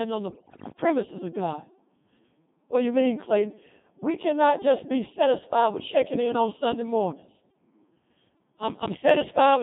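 A thin, robotic, buzzy voice runs through the whole speech recording, confined to roughly 150 Hz to 3.6 kHz, with the natural texture of the talker replaced by something synthetic. That is the sound of the Codec 2 vocoder, here heavily damaged, at a rate that fits its 2.4 kbit/s mode. Rather than preserving the waveform, this codec transmits only pitch, voicing, loudness and a coarse spectral shape, and the decoder rebuilds speech from sine waves. Near the start, from 0.30 to 0.72 s, the voice lurches in pitch and level and changes tone colour abruptly, dissolving into warbling, bleep-like gibberish. These are bit errors on digital voice radio, at a heavy rate of very roughly one bit in seven. Because each bit in such a low-rate stream sets the pitch, energy, voicing or spectrum of an entire frame, corrupted bits throw whole stretches of synthesis off course, and this burst is long enough to span many consecutive frames.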